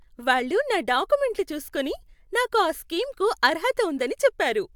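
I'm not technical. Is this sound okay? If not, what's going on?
Yes, nothing stood out as a problem when listening to this recording.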